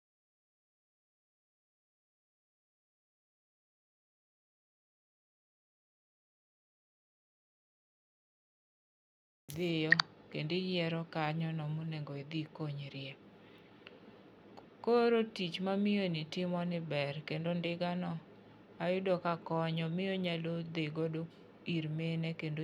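The speech signal has no technical faults at any point.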